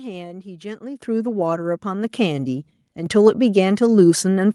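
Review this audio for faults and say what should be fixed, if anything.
The call software judged the microphone too quiet and raised the device's input volume in steps, a microphone volume stepped up fault, at 1.02 s (about 10 dB), 2.04 s and 3.06 s (about 4 dB each). Speech and background jump louder together at each point. To prevent it, disable automatic microphone gain adjustment in the call software and set the input level manually.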